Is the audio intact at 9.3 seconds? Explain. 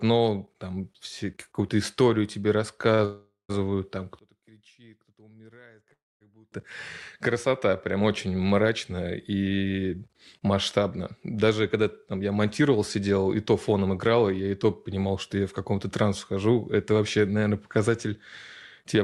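Yes, the speech at 9.3 seconds plays through intact, with no dropout, click, distortion or other fault at that moment.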